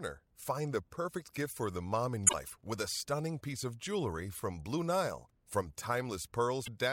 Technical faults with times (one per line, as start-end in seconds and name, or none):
2.26-2.34 damaged data in a compressed stream
6.62-6.68 damaged data in a compressed stream